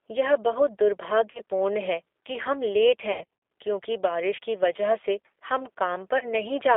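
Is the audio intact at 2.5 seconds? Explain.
No. At 2.5 s the speech carries G.729 codec damage, present throughout, consistent with an 8 kbit/s rate. Each 10 ms frame is rebuilt from a vocal tract filter, pitch predictor and a few pulses, so it sounds rough and synthetic. A spectrogram shows energy confined to about 300 Hz to 3.5 kHz.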